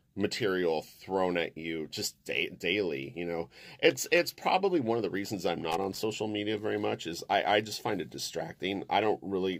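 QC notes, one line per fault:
5.71–5.99 s, loose connector crackle: an irregular burst of scratchy crackle lasting about a quarter second as a worn or dirty contact makes and breaks, chopping the signal. Unlike evenly spaced digital clicks or a clean dropout, the spacing is random and gritty.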